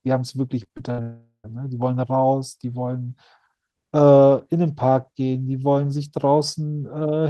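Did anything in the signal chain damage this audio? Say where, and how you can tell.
Yes, the damage is at the network stage. From 0.63 to 1.00 s there is repeated packet loss with a robotic sound: four short holes, the longest about 65 ms, are patched by extending the preceding sound. About a third of that stretch is concealment, so it sounds choppy.

Right after, from 1.02 to 1.46 s, the audio turns into a stretched buzz or hiss that fades, with the final 80 ms silent before normal sound resumes. That points to a likely long network dropout: about 420 ms never arrived and was concealed, then lost.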